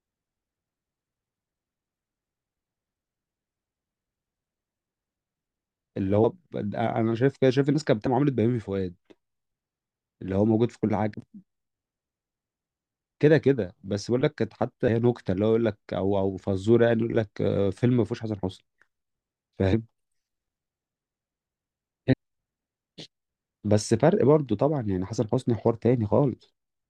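A speech recording with compressed frames skipped at 6.23, 8.05, 11.13, 14.87, 19.72, 22.12 and 26.41 s. At each point, whole blocks of coded audio never reach the output, so the speech lurches forward, losing somewhere between about 50 and 200 ms, with the longest losses at 8.05, 14.87 and 22.12 s. The jump sizes fit a codec frame of about 24 ms.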